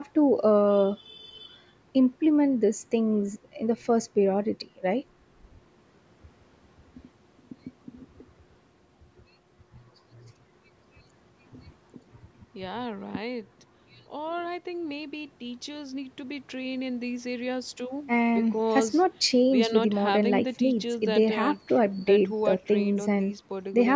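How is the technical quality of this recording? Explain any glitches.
Nothing here counts as a glitch: the speech has simply gone through ordinary call microphone processing, which trims away the deepest bass and leaves nothing above about 8 kHz, and that's just how call audio normally sounds.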